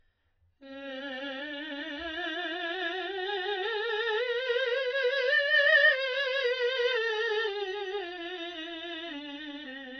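Throughout, the music stops dead above 6 kHz and sustained tones warble and smear, likely from heavy AAC compression at a very low bitrate, near 12 kbps. A plain low-pass filter would sound dull but clean, whereas here the remaining spectrum bubbles.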